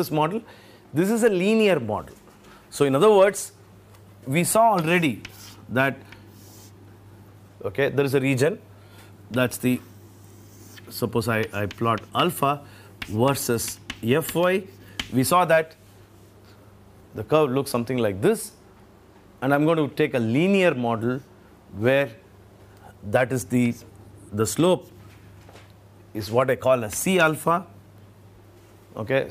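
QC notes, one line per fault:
Nothing to flag here; I listened all the way along and didn't hear anything worth noting.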